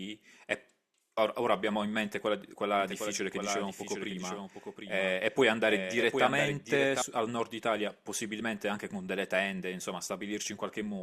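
From 2.8 to 7.02 s, a slower second path likely adds a doubled audio track: a dry, somewhat quieter copy trailing roughly 0.7 s, with abrupt edges.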